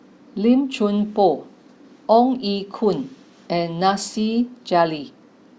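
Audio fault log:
Nothing stood out on listening to this speech recording.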